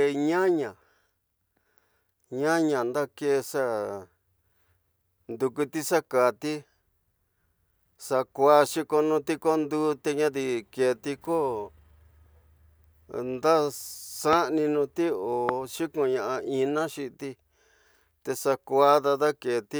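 A sudden electrical step, likely from a plug, switch or static discharge, twice injects a brief voltage spike into the signal path, producing two loud pops in the speech. The first, from 14.33 to 14.35 s, peaks roughly 15 dB above the speech; the second, from 15.49 to 15.51 s, is stronger at around 20 dB. Each lands as a single sharp pop on top of the speech, which continues underneath without interruption.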